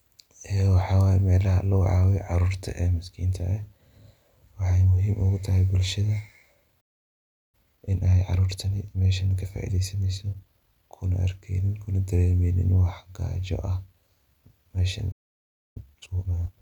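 At 6.80 s the speech cuts out mid-flow for about 0.72 s, a playback stall, likely from the player running short of buffered data or its output thread being blocked. From 7.55 s to 10.55 s a time-compressed catch-up follows: the player trims small segments and cross-fades the joins to clear its backlog, so delivery runs about 1.1 times faster at unchanged pitch. A second stall silences the output from 15.11 s to 15.77 s, about 0.64 s. The catch-up after it, from 15.77 s to the end, is harder, at 1.5 times speed, and sounds rushed.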